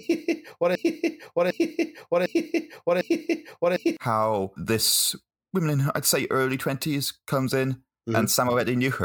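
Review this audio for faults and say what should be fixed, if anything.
A broken-record loop runs from 0.75 s to 3.97 s, ending just before "how this woman in". A 0.75 s fragment repeats four times, likely from a stalled stream resending its last buffer, so the intended audio is lost. A spectrogram shows identical blocks tiled at 0.75 s spacing. To prevent it, the player or stream should output silence or signal an underrun when it stalls instead of recycling the held fragment.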